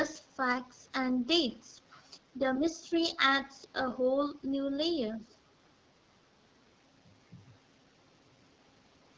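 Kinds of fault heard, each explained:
AMR wideband (HD Voice) codec: The whole clip carries plainly audible coding damage, which fits AMR-WB at one of its lowest rates, around 8.85 kbit/s. The codec models the voice as pulses driving a vocal tract filter up to 6.4 kHz and fills the band above with shaped noise. At a rate this low the model is too coarse, so the speech sounds rough and raspy, with a hissy, synthetic top end rather than real detail.
Other side's voice leaking through: From 2.56 to 2.71 s and again from 5.22 to 5.36 s, a faint second voice sits underneath the speech. It is roughly 25 dB below the talker the first time and roughly 35 dB below the second time. It comes in as brief scraps rather than a sustained presence. The likely cause is echo from the far end's audio playing on a loudspeaker that the echo canceller did not fully remove from the microphone signal.
Speech suppressed in double talk: Between 2.83 and 2.92 s the talker's level briefly sags, by about 5 dB at its deepest, across about 70 ms in total. 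This comes just after the first leaked voice. The dip is short and shallow. It likely happened because both sides were talking at once, so the echo canceller could not tell the talker from the loudspeaker echo and turned the signal down.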